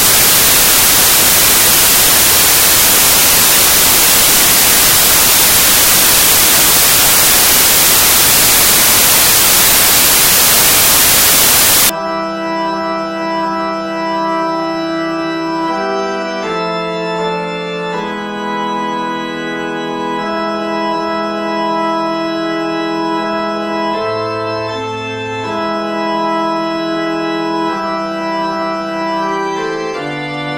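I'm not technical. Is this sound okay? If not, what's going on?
No. Samples built from the wrong bytes, from 0 to 11.9 s: the player stitches each sample's pieces together wrongly, so tiny, fast-changing detail becomes the main signal. That makes a loud hiss.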